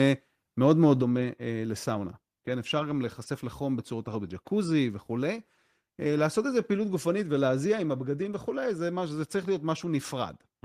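Microphone overload from 0.7 to 0.91 s: the speech turns harsh and crackly as peaks likely exceed the converter's ceiling by about 2 dB, flattening a small fraction of samples. Microphone volume stepped down at 1.02 s: speech and background fall abruptly by about 5 dB, likely the call software cutting the input gain after that distorted burst.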